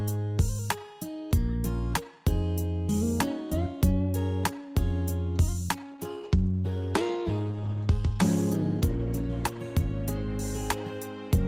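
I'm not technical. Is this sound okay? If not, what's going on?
No. From 5.83 to 10.05 s there is a call bitrate drop: the connection shrank, so the sound turns rougher and more muffled until it recovers.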